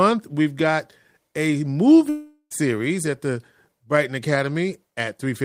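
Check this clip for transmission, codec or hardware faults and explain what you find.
One fault is present, a long network dropout from 2.09 to 2.53 s. Incoming audio likely stopped arriving, so the receiver stretched the last sound into a fading buzz or hiss for 411 ms, then 60 ms of silence, before speech resumes with 420 ms lost.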